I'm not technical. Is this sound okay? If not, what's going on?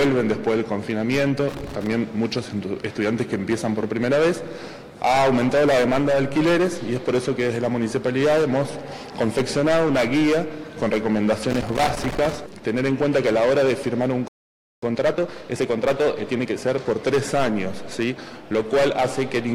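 No, there are a few problems. At 1.49 to 1.87 s and again at 11.50 to 12.35 s you get loose connector crackle, an irregular scratchy burst. It's what happens when a worn or dirty plug contact flickers on and off as the cable moves, chopping the sound.

At 14.28 s the audio just stops for about half a second (0.54 s). That's a playback stall. The likely cause is the player running out of data or getting held up, so nothing comes out until it recovers.

Right after, from 14.82 to 16.98 s, there's time-compressed catch-up. The player makes up for the lost time by trimming tiny slices and blending the joins. The audio runs 1.25 times faster but keeps its normal pitch, so it sounds rushed.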